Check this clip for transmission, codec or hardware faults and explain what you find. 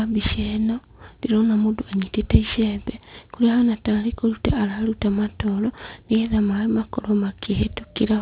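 One fault is present: aliasing, running through the whole clip. The speech was resampled to a lower rate without an anti-aliasing filter, which fits a drop to 8 kHz sampling with a fold point at 4 kHz. Energy that lay above 4 kHz was mirrored back below it as spurious, unrelated frequencies, sitting roughly 20 dB under the speech. Sibilants come out gritty and metallic, and the spectrum stays dense right up to the 4 kHz edge instead of rolling off.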